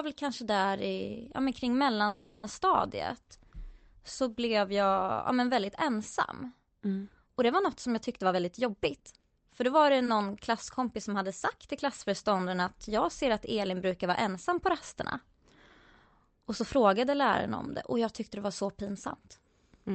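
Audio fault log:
2.07–2.45 s, call audio freeze: the sound stalls for 0.36 s and is bridged by a fading continuation of the last sound. Nothing is lost; the audio resumes where it stopped, 0.36 s late. The likely cause is packets held up in transit until the jitter buffer ran dry.
8.17–10.27 s and 11.49–12.20 s, jitter buffer speed-up: pitch stays the same while pacing hurries, at 112% speed in the first span and 106% in the second. After delay built up, the receiver trimmed many pitch-period-sized slices, removing roughly a third of a second and then a few hundredths.
8.99–9.02 s and 9.20–9.23 s, short concealed packet loss: inside the faster span, two brief smears where 20 ms of audio never reached the decoder. Each hole was filled with a 10 ms continuation of the preceding sound, then blended back into the real signal.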